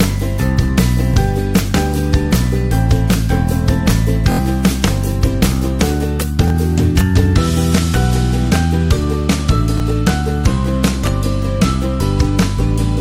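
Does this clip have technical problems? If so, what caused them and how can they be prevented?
Yes, repeated buffers at 1.14, 4.32, 6.48 and 9.78 s. Playback ran dry and replayed the last 23 ms block, which fits a 1024-sample buffer. At 4.32 s it repeats three times, giving a longer stutter. Larger buffers or higher playback-thread priority would prevent these underruns.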